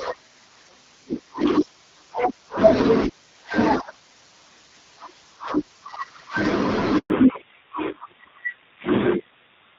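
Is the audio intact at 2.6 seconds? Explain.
Yes, the audio is intact at 2.6 seconds, with the speech coming through cleanly over the AMR wideband (HD Voice) codec at 12.65 kbit/s and nothing breaking up at that moment.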